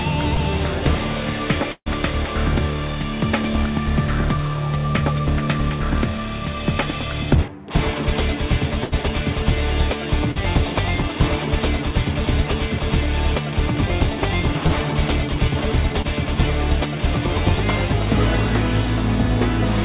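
At 0.34, 10.32, 14.68 and 16.02 s there's short concealed packet loss: 20 to 40 ms went missing, and the receiver patched each hole by stretching the previous sound, leaving quick smears or wobbles. Bursts of packet loss at 1.72 s (about 140 ms gone, ending in a silent stretch) and 8.84 s (about 80 ms) are worse, a held buzz or fading hiss before the audio resumes further along. Through the whole clip, nothing comes through above 4 kHz, which points to a G.711-style narrowband call path.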